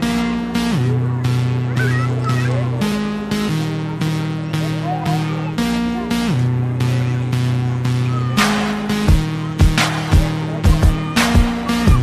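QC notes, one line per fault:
Nothing stood out on listening to this audio.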